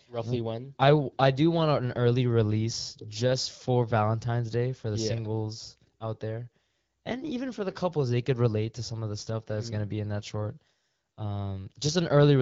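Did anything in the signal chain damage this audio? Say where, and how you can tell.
No, nothing in the chain seems to have hurt this speech; it has simply gone through the AMR wideband (HD Voice) codec at 12.65 kbit/s, which fits the light coding you'd expect from that stage at that rate.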